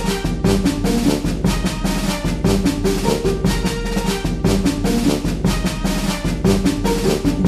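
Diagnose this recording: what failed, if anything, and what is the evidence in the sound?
A click or pop recurs at a steady interval of 0.93 s, from 0.85 s to 7.34 s, about seven times in all. That regularity points to the driver or buffer stage, most likely clock drift buffer slips. Two devices run on separate clocks that disagree by roughly 200 ppm, so the buffer between them gradually over- or underflows. Each time it does, a handful of samples is dropped or repeated, causing a small discontinuity in the waveform.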